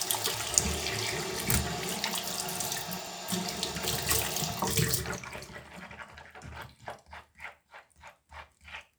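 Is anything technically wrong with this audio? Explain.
Yes. A likely dropped buffer (overrun) occurs at 0.34, 3.07 and 6.14 s: samples were overwritten before being read, so the sound jumps ahead without any gap. Each jump is a lurch in the sound, losing roughly 100 ms, 150 ms and 300 ms respectively.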